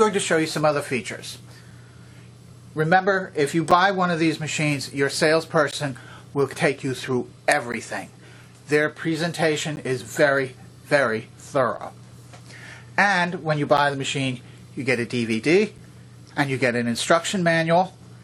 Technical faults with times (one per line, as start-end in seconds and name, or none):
1.71 gap between stream segments
3.71 gap between stream segments
5.71 gap between stream segments
7.72 gap between stream segments
9.76 gap between stream segments
11.77 gap between stream segments
13.77 gap between stream segments
15.78 gap between stream segments